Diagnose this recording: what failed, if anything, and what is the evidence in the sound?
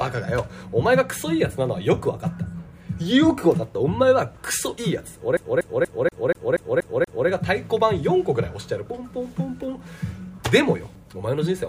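Playback failed: CD stuck on one turn. From 5.37 to 7.28 s, a 0.24 s loop repeats eight times. The laser jumps back each revolution.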